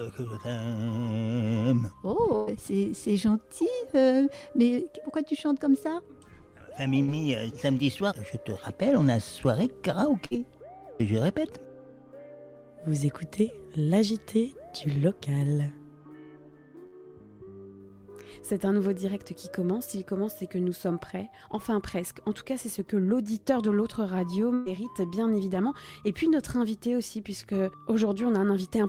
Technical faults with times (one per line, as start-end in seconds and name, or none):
2.35-2.50 burst of packet loss
7.03-7.11 burst of packet loss
10.26-10.40 burst of packet loss
16.86-16.95 burst of packet loss
24.54-24.69 burst of packet loss